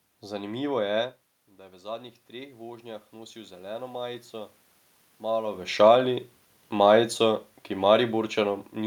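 Automatic gain rising from 1.47 to 4.61 s: after the input dropped by about 15 dB, the gain control slowly added about 8 dB, swelling voice and room noise together.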